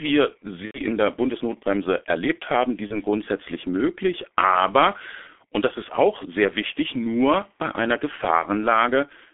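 Throughout, the speech carries the signature of the G.723.1 codec. The band sits between roughly 250 Hz and 3.5 kHz, and the voice turns hoarse and muffled, with smeared consonants. The coding damage is heavy, which fits a rate near 6 kbit/s. Unlike a plain telephone band-limit, the roughness comes from a slowly updated voice model working in 30 ms frames, not from filtering alone.

Three dropouts follow, each handled as VoIP packet loss concealed by the speech codec. From 0.65 to 0.80 s, about 90 ms of signal is missing. The decoder repeats its last pitch and filter, so the gap fills with a fading, extrapolated sound that goes silent on the third lost frame. Shorter versions occur at 2.87 to 3.00 s and 8.40 to 8.45 s, each covering about 30 ms. What separates this from a simple mute or click is the synthetic continuation and the weak, distorted sound that lingers after the signal returns.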